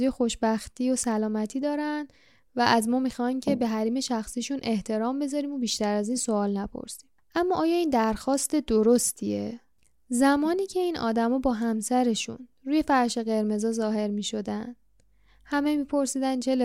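No technical faults can be heard anywhere in the recording.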